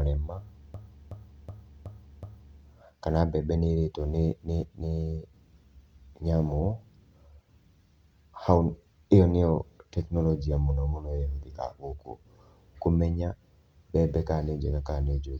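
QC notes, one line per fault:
0.74–2.60 s, system hang loop: a machine-gun stutter as one 0.37 s slice of speech repeats five times at 2.69 Hz, then resumes with essentially nothing missing. A driver froze while the hardware kept replaying its ring buffer, consistent with a 16384-sample buffer.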